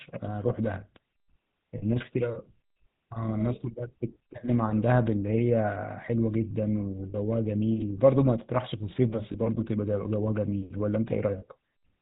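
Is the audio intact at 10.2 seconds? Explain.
No. At 10.2 seconds the speech is coloured by the GSM full-rate codec, which runs through the whole clip. The codec models the vocal tract and drives it with a sparse, regularly spaced pulse train, so the voice turns buzzy and gravelly, with nothing above 4 kHz. The damage is plainly audible, which fits a 13 kbps rate. Simple telephone band-limiting would sound muffled but smooth; this fault adds the grainy, pulsed roughness on top.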